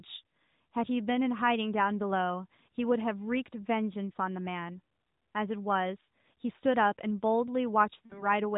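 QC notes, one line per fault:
8.06–8.26 s, lost AMR speech frames: a brief smeared, softened dip, then a momentarily weak or rough return. About 40 ms went missing, fitting two dropped 20 ms frames, which the narrowband decoder bridged by repeating its last good pitch and vocal tract settings at falling gain.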